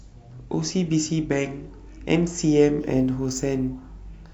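From 2.8 s to the end, the speech picks up sample clock jitter. The converter's timing wanders by a couple of microseconds, so steep, bright parts of the waveform are misplaced, leaving a rough hiss that tracks loudness. On a spectrogram, faint broadband noise shadows the high frequencies, well below the signal, and it disappears in gaps.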